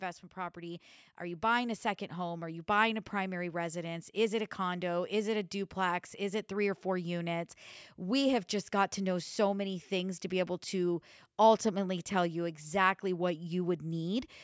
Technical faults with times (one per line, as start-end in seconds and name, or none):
0.34-4.16 automatic gain rising